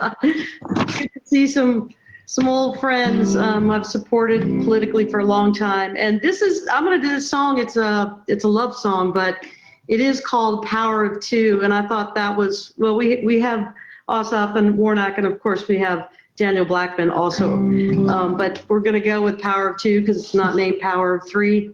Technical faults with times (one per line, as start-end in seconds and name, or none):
0.00-21.73 gain pumping